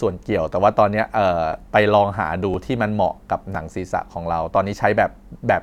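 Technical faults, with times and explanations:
0.53, 1.53, 2.54, 3.55 and 4.56 s, overlapping chunks: the speech was handled in 1.0 s chunks, and each new chunk begins about 7 ms before the previous one finished, so that sliver of audio is played twice at every join. The doubled fragment breaks the waveform's continuity, producing a brief click or tiny stutter. Because the chunks are evenly sized, the glitches recur roughly once per second, a steady rhythm of small defects through the speech.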